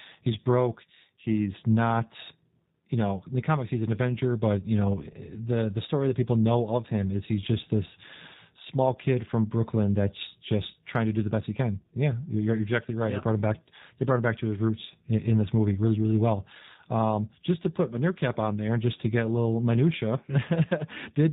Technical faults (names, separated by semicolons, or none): G.729 codec